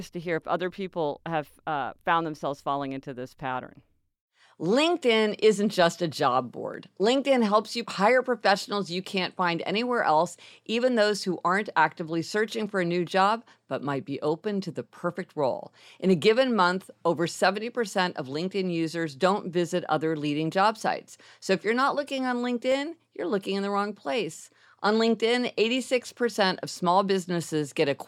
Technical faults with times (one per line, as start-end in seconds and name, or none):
6.74 dropped samples
12.62 dropped samples
22.72 dropped samples